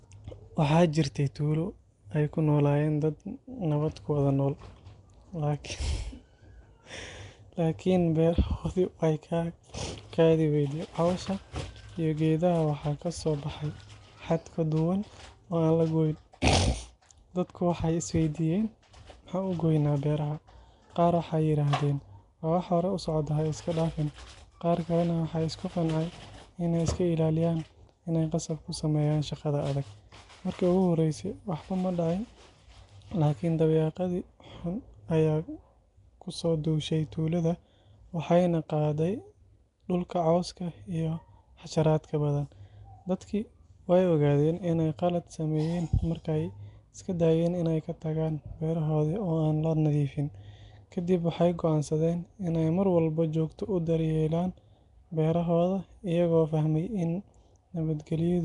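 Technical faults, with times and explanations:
Throughout, Nellymoser compression: the speech carries a rough, hissy haze and a smeared, underwater feel, with nothing above 10.6 kHz. That's likely Flash's Nellymoser Asao codec, coarsely quantising short blocks and filling starved bands with noise, which fits a bitrate near 44 kbps.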